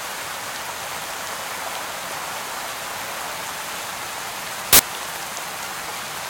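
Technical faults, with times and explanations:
4.73 to 4.79 s, file tags played as audio: embedded cover-picture data is read as samples, and its compressed bytes give a 66 ms hard-edged burst of very loud white noise.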